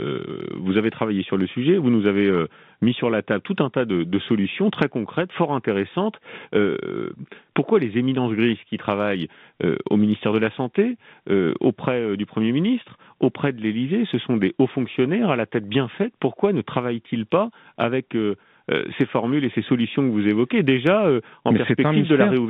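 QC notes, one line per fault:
No fault to note.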